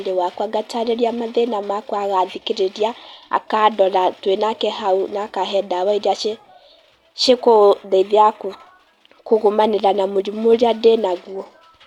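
Nothing stood out as a technical fault on listening to the speech recording.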